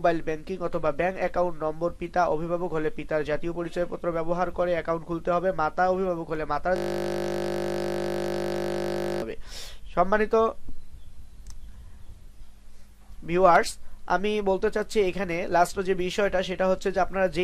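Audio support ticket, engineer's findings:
System hang loop, 6.76 to 9.22 s. Audio replaced by a steady 50 Hz buzz: one 20 ms slice of the ring buffer replayed exactly, about 120 times, while host or driver stalled. Probable component: audio driver or DMA feed. Unlike mains hum, this replaces the sound rather than sitting under it, starts and stops abruptly, and is built from identical repeats; too short a loop for stutter.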